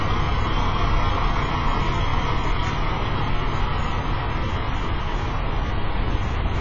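A short recording of everyday sound with AAC compression damage running through its whole length. Nothing is present above about 7.5 kHz, so the top octave is gone and the result sounds dull. The remaining spectrum is heavily degraded, with smeared transients and a warbling, fizzy texture where energy is sustained. This is likely low-bitrate AAC-LC coding, where a coarse hearing-model quantiser discards bands and lowers the cut-off. The damage fits a bitrate around 16 kbps.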